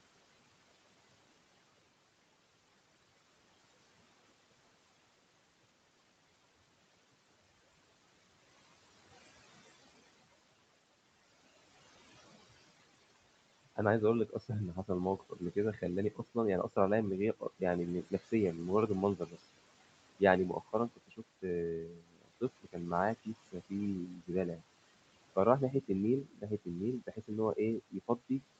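The background pumps down between phrases and swells back under them. These are noise suppressor artifacts: the suppressor cuts the steady room noise, sitting about 16 dB below the speech, by about 21 dB frame by frame.

From 13.65 to 16.77 s, 17.4 to 18.58 s, 19.17 to 19.37 s and 20.2 s to the end, soft consonants and word endings sound swallowed, dropping by up to about 22 dB. This is speech cut by the noise suppressor, which mistakes quiet speech for noise and turns it down.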